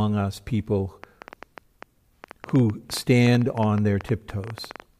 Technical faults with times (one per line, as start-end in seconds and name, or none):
1.04-4.81 train of clicks